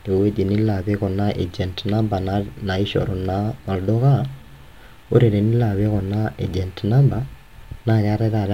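A speech recording with no audible technical faults.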